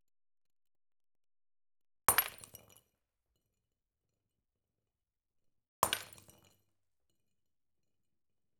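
At 4.67 s and again at 6.53 s the sound jumps forward by a few milliseconds with no gap. That's likely a dropped buffer (overrun): the recording side didn't fetch its samples in time, so they were overwritten and the edges butted together.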